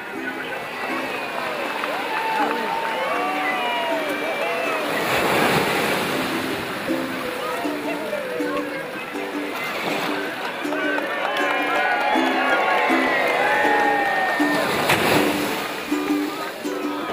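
No technical faults can be heard anywhere here.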